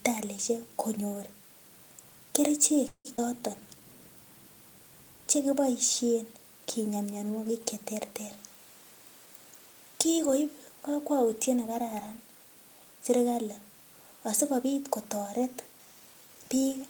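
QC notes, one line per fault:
2.87–3.07 s, call audio freeze: the speech stalls for about 0.19 s. The receiver stretches the last sound into a fading buzz for roughly 0.17 s, the last 70 ms of that falling to silence, and then the speech resumes where it stopped, so nothing is lost and 173 ms of delay is added. A likely cause is late packets leaving the jitter buffer empty. On a spectrogram, the final harmonics smear flat and fade, then a blank strip appears before normal structure returns.
3.17–3.20 s, skip ahead: right after the freeze, about 70 ms of speech is gone and the two sides are butted together with only an 11 ms bridge. The stretch was dropped in transit or by the buffer, clawing back the delay it has just gained. It is heard as a tiny clipped jump in the sound. On the waveform, the envelope shows an abrupt step where mismatched segments meet, and the spectrogram shows formant tracks breaking and restarting without any gap.
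3.26–3.81 s and 9.26–9.74 s, 15.72–16.43 s, jitter buffer slow-down then speed-up: from 3.26 s the buffer repeats pitch periods to add 70 ms back, so the speech runs at about 89% speed with unchanged pitch and sounds slightly drawn out. The spectrogram shows harmonics held longer with an unchanged spacing. Later the buffer trims pitch periods to cut excess delay. From 9.26 to 9.74 s, just before "kikoip kakwautiet nekararan", about 70 ms is removed and the speech runs at 112%. From 15.72 to 16.43 s, after "asikopit kotoret", roughly 100 ms is removed and it runs at 115%. Both sound hurried at normal pitch, and on the spectrogram the syllables are compressed in time while the harmonic spacing stays the same.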